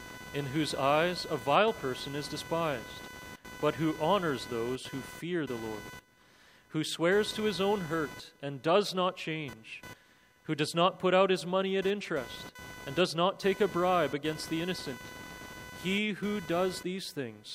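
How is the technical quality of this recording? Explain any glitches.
The recording has one persistent fault that runs from start to finish.

Computer activity noise is present throughout. Shifting processor or peripheral load disturbs the shared ground, producing a buzzing chirp pulsing around 500 Hz, roughly 20 dB below the signal. On a spectrogram it shows as a comb of harmonic lines that flicker independently of the audio.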